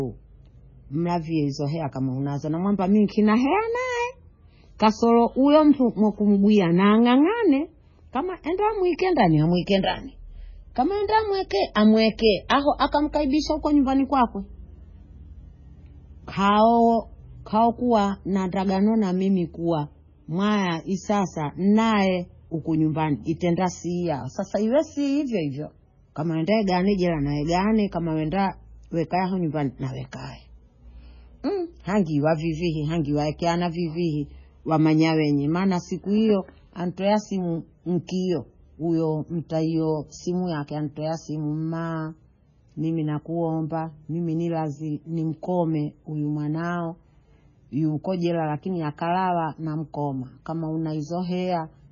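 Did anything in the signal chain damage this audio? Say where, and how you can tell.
Yes. Throughout the speech the sound is watery and swirly, with metallic chirping on the s sounds, smeared consonant attacks, and nothing at all above 7 kHz. That is the signature of lossy codec damage, likely MP3 compression at a very low bitrate, which fits something around 16 kbps. Starved of bits, the encoder cut the treble at a fixed frequency and dropped weak spectral lines, which flicker on and off from frame to frame and cause the swirl.

Two sharp onsets are preceded by a brief smear of hiss, at 12.49 s, spreading about 11 ms ahead of the attack, and at 38.07 s, spreading about 17 ms. This is pre-echo, also from the codec stage. Each attack landed late in a transform block, and the quantisation noise sized for the loud attack was spread evenly across the whole block, filling the quiet moment before it and softening the onset.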